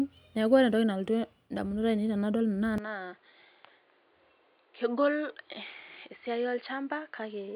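At 2.78 s the speech abruptly turns dull and boxy and stays that way to the end. The likely cause is the input switching to a poorer device, with no gap at the changeover. From there nothing reaches above 4.8 kHz, so the spectrogram shows a flat ceiling where the upper band vanishes. The waveform drops by about 5 dB, and a new noise floor sits roughly 35 dB under the speech.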